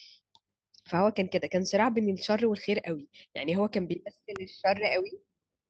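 At 4.36 s a single sharp snap cuts across the speech, an electrical switching spike likely picked up from a nearby switch or discharge, showing as a full-band vertical spectrogram line and a needle-thin waveform spike. The call path's roughly 8 kHz upper limit stays visible throughout.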